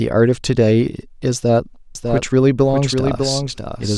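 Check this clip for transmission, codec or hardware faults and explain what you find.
One fault is present. A doubled audio track runs from 1.95 s to the end: a second full-band copy of the speech, likely from a slower capture path or an out-of-step edit, enters abruptly about 0.7 s behind, roughly 5 dB quieter, with no decay or room colour.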